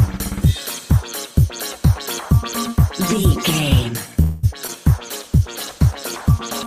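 Three call-transport faults sit close together in the back part of this audio. From 4.21 to 4.45 s there's a call audio freeze. The last bit of sound gets stretched out into a fading buzzy smear for about 215 ms rather than dropping to silence. Then things pick up right where they left off, so nothing's actually lost, but everything after it lands about 215 ms later than it should. That's most likely packets stalling in transit and the jitter buffer running dry, with the receiver padding the wait by extending what it last had. Right after, between 4.67 and 4.70 s, there's a short concealed packet loss. About 20 ms of real audio never made it to the decoder, which fits a single lost frame. Roughly 14 ms of synthesized fill covers the hole before it crossfades back, so you hear a quick little smear or wobble there. Then from 5.00 s to the end you get a call bitrate drop. The encoder gets squeezed from 32 down to 13 kbps and stays at the low rate for about 1.7 s. 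At that rate Opus codes much more coarsely and trims the top end, so the sound turns rougher and duller, a bit watery, and doesn't recover before the clip ends.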